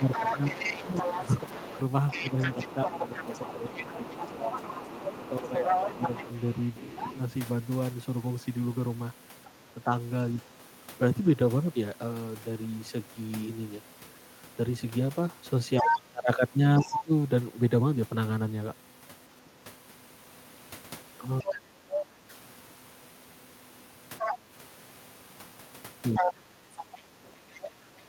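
From 0.0 to 9.9 s, speech suppressed in double talk: the speech repeatedly dips by around 10 dB, for about 4 s in total, likely because the echo canceller ducked both sides while both talked. Over 0.1 to 9.5 s, the other side's voice leaks through a little quieter than the speech. This is a separate, second voice, not a repeat of the talker as in ordinary echo.

The leak recurs from 15.78 to 17.01 s, now as loud as the speech. Suppression returns from 15.82 to 22.33 s, affecting about 1.5 s in total, with drops reaching about 25 dB. These dips likely track the other voice rather than the talker's own pauses.

From 21.51 s to the end, leakage again matches the speech level. From 26.19 s onward, suppression cuts the talker by up to about 20 dB.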